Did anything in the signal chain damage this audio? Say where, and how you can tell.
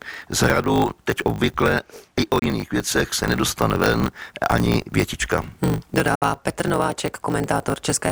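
Yes. At the driver or buffer stage there is a block size mismatch (truncated): one stage writes longer blocks than the next reads, which fits 1024-sample blocks, and each block's tail is discarded. The speech carries a 50 Hz buzz at the block rate and runs 1.16 times fast at roughly normal pitch.

The second fault is in the wireless link, likely a Bluetooth dropout. The output goes silent from 2.39 to 2.42 s, right after "teď obvykle i o" and before "věcech se nedostane ven", and again from 6.15 to 6.22 s. About 29 ms and 73 ms of sound are lost, and the speech resumes as if it had kept playing.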